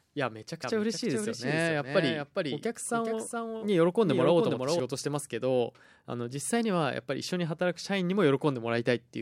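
Speech with a doubled audio track from 0.64 s to 4.80 s. A second full-band copy of the speech runs roughly 0.4 s behind the original, a few decibels quieter. Unlike an echo or reverberation, the copy has no decay and no room colour, and it begins and ends abruptly. That points to the same signal being mixed in twice, most likely through a second, slower capture path or two misaligned copies in an edit.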